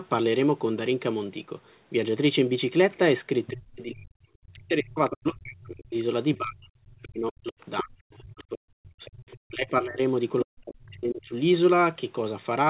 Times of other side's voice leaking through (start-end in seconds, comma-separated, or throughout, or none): 7.61-7.83, 9.05-9.39